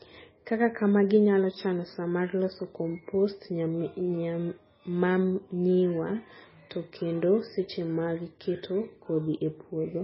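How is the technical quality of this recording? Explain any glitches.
The technical quality is poor. The speech carries heavy lossy-coding damage from start to finish.

MP3 compression, likely the cause, affects the whole recording. Nothing is present above about 5.6 kHz, so the speech sounds dull. The damage points to a very low bitrate, around 16 kbps. Starved of bits, the encoder cut the treble and dropped weak frequency lines, which flicker in and out between frames. That produces a watery, swirling texture, metallic chirps on s sounds, and smeared consonant attacks.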